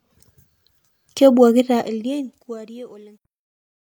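A speech clip with truncation distortion on a fade from 1.6 s to the end. Undithered quantisation, consistent with roughly 11-bit resolution, turns the quiet tail into gritty steps, worst from 2.93 s onward.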